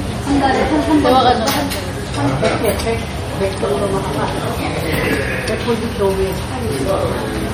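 From start to finish there's plainly audible MP3 compression damage, likely from a low bitrate encode around 48 kbps. The encoder is starving weak frequency lines, so they flicker between frames, giving a watery, swirly texture with smeared attacks, and nothing survives above 19.9 kHz.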